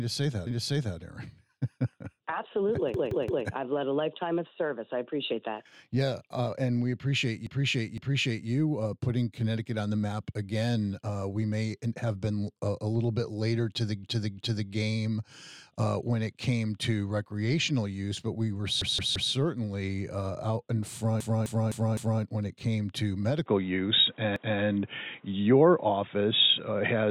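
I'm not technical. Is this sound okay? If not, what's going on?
No. There are repeated frames at 0.47, 2.94, 7.47, 14.04, 18.82, 21.20 and 24.36 seconds. Short stretches of the recording, between about a sixth and half a second long, were stored more than once, so the audio stutters and replays itself.

At 23.46 seconds the input switched to a poorer device, likely a different microphone or headset. From there to the end the sound turns duller, with nothing above 3.8 kHz, a changed loudness and faint background noise.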